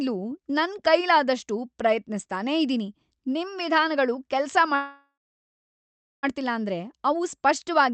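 A call audio freeze runs from 4.75 to 6.25 s, just after "ಇದೀನಿ ನಿಮ್ ವಿಧಾನಗಳು ಕೆಲ್ಸ". The likely cause is packets stalling in transit so the jitter buffer ran dry. The receiver stretches the last sound into a brief fading buzz, then about 1.1 s of silence, inserting roughly 1.5 s in total. The speech resumes intact with "ಅಂದ್ರೆ ಅವು ಸ್ಪಷ್ಟವಾಗಿ", nothing lost but everything after it arriving later. The band-limited call sound tops out near 8 kHz.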